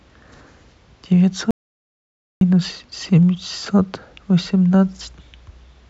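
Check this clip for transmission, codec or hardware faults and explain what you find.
One fault is present. From 1.51 s to 2.41 s an audio dropout to silence removes about 0.9 s of speech: the input was likely lost, writing silence without room tone.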